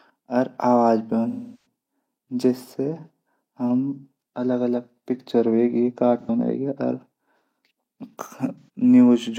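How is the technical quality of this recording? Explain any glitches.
The recording has three dropouts from AAC frame loss with concealment. At 1.29–1.65 s the sound smears, decays toward silence and fades back. At 6.21–6.30 s and 8.59–8.68 s brief noisy, phasey patches appear. The decoder is re-synthesising missing frames from the last good spectrum. On a spectrogram these show as blurred, stretched bands, and the longer one fades into a dim gap in the waveform.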